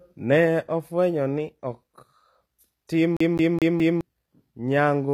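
From the start and through all of the speech, the treble sounds synthetic: s sounds come out gritty and lisping, upper harmonics fail to line up with the lower voice, and nothing is present above 14.9 kHz. This is likely HE-AAC compression, and the damage is plainly audible. It rebuilds the top band by copying lower bands upward under a coarse envelope, which fits a low bitrate around 24 kbps. Plain low-pass filtering would sound dull and clean, not gritty and metallic like this.

From 3.17 to 4.01 s the CD is stuck on one turn. The same 0.21 s slice of speech plays four times in a fast, even stutter, with a brief mute at each jump as the laser is thrown back one track at the same scratch on every revolution. The strict regularity and the fixed loop length set it apart from network dropouts or buffer glitches, which break up the sound at uneven intervals and do not repeat identical audio.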